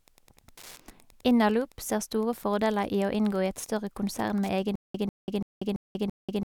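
Speech runs under Wi-Fi interference for all 6.56 s: a faint, steady ticking about ten times a second, matching a radio beacon every 102.4 ms that the audio circuit picks up and rectifies, sitting around 30 dB below the speech. On a spectrogram it shows as thin vertical broadband lines evenly spaced about 102 ms apart. From 4.76 s to the end there is a stutter with silent gaps. The same 146 ms fragment repeats five times, each followed by 189 ms of digital silence, a cycle of about 335 ms. The likely cause is a stalled stream replaying its last buffer at each retry, so the speech that should follow is lost. The waveform shows identical blocks separated by near-flat stretches of silence.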